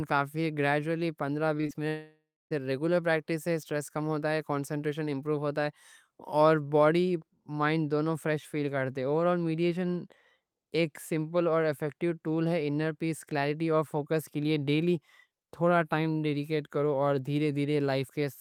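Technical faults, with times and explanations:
1.57–1.61 s, 1.61–1.65 s and 1.67–1.71 s, short concealed packet loss: about 20 ms missing each time. The receiver extended the preceding sound, causing brief smears.
1.89–2.53 s, long network dropout, likely: about 0.62 s never arrived. A fading continuation of the last sound fills the gap, ending in about 0.29 s of silence before audio resumes.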